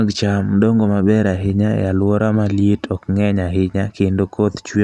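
Nothing in this speech recording points to a technical fault, and the signal holds continuous and steady throughout.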